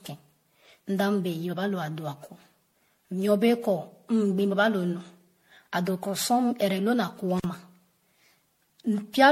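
From the start, the speech sounds swirly, smeared and hollow. Consonant attacks blur, and nothing reaches above 16.5 kHz. The damage is heavier than one lossy encode at a rate near 64 kbit/s would leave. The likely cause is generation loss, with the audio decoded and re-encoded as MP3 around seven times. Each pass quantises again on a shifted frame grid. The noise and spectral holes pile up.

At 7.38 s the sound cuts out for about 44 ms and returns at 7.44 s. Crackle marks both edges of the gap, and faint hiss fills it. This is an intermittent contact. A loose cable or plug opened briefly and broke the signal path. It closed again almost at once.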